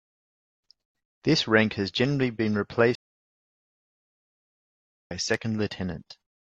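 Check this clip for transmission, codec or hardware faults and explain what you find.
One transmission fault stands out: a stream reconnect. At 2.95 s the speech cuts to silence until 5.11 s, about 2.15 s. The connection dropped, and the player reconnected and restarted its decoder mid-stream. Speech resumes roughly a second further on, so that stretch is lost.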